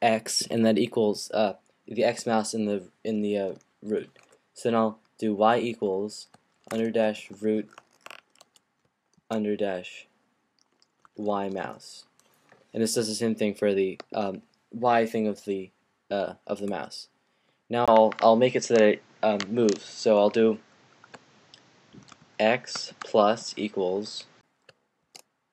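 After a 20 ms gap at 17.86 s, the sound dulls until 24.43 s, likely an input switched to a poorer device; the spectrogram goes empty above 7.9 kHz.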